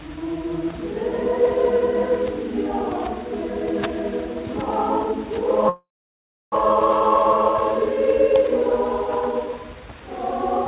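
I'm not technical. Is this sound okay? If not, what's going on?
No. From 5.69 to 6.55 seconds there is a call audio freeze. The sound buzzes, fades to near silence, then resumes, likely from delayed network packets.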